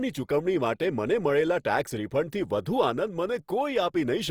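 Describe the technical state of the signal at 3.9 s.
At 3.9 s the speech has the grainy, plainly rough texture that runs through the whole clip, likely Opus compression in CELT mode, with noise-filled bands consistent with roughly 24 kbps.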